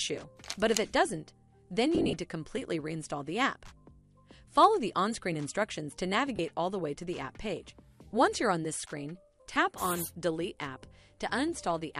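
Lost LE Audio frames break up the sound three times. From 1.95 to 2.13 s, 120 ms goes missing in scattered runs of up to about 40 ms. Brief gaps follow at 6.36–6.39 s and 9.54–9.56 s. Each time, the LC3 decoder repeats the last spectrum with random signs, smearing tones into noise.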